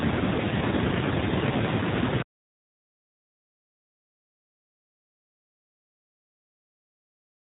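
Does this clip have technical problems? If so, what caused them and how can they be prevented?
Yes. The speech carries AMR narrowband mobile codec damage for its whole length. Nothing above 4 kHz survives, so the sound is dull and boxed in. The codec models the vocal tract and drives it with a few pulses per 5 ms subframe. At a low bit budget that model sounds buzzy and synthetic. The harshness here fits the 7.4 kbps mode. To prevent it, record or transmit over a wideband path, or use a higher AMR mode.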